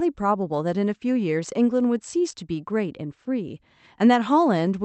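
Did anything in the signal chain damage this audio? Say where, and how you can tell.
No, the speech comes through the call path intact, with the top end stopping around 8 kHz, which fits an Opus call codec running at 48 kbps with its bandwidth capped there.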